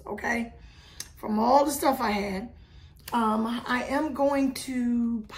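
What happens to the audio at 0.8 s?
Nothing goes wrong at 0.8 s; the audio is intact at that moment.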